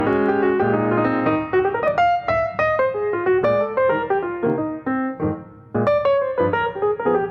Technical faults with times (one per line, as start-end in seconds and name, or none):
0.00-7.31 gain pumping